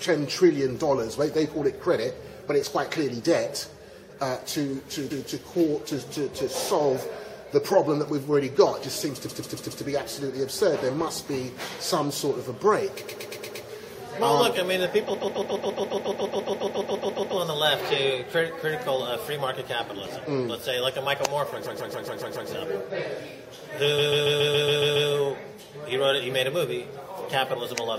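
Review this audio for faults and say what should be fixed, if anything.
Repeated frames cause a stutter at 5.1, 9.25, 13.04, 15.13, 21.65 and 23.98 s. A run of compressed frames was written more than once. The decoder replays each 0.14 s block, or 0.12 s at 13.04 s. The worst loop lasts until 17.36 s. Together they add about 5.5 s. To prevent this, make sure the encoder or stream writer emits each frame only once.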